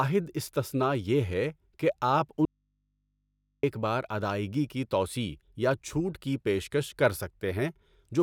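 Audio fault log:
2.45–3.63 s, audio dropout to a faint residue: right after "یہ ہے کہ آپ" the speech just vanishes for about 1.18 s, and all that's left is a low mains hum sitting roughly 50 dB below the talker. The cut and the return at "بار ادائیگی کی توسیع" are both abrupt, nothing like a natural pause. It's likely the source got disconnected while the input stayed open, so the hum is what an unterminated input picks up.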